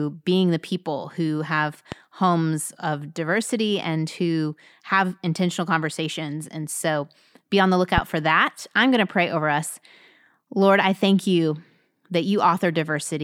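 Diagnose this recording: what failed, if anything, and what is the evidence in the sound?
The analogue wiring stage failed, likely through an intermittent plug or contact. Two loud pops sit on the speech, at 1.92–1.94 s after "the people who have" and at 7.98–8.00 s after "so be on the". Each is about 10 to 15 dB above the speech, which continues underneath.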